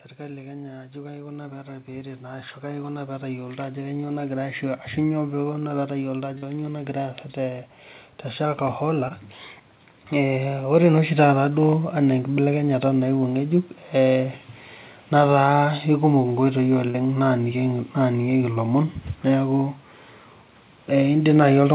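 Right from the start, at 0.17 s, there's automatic gain rising: the gain control decided the input was too quiet and kept turning it up until about 4.09 s, roughly 10 dB in total. You hear the speech and the background noise floor swell together over those four seconds rather than the talker getting louder on their own, so the room seems to creep closer along with the voice.

Then there are four bits of short concealed packet loss. At 6.38 to 6.44 s about 40 ms of audio didn't arrive in time, and again at 16.90 to 16.96 s. Shorter gaps of about 20 ms hit at 9.08 to 9.12 s and 18.54 to 18.58 s. Each time the receiver papered over the hole by stretching out the last bit of sound before fading back into the real signal. That leaves a quick smear or warble. All of this sits on a narrowband call sound with nothing above 4 kHz, which fits a G.711 mu-law codec.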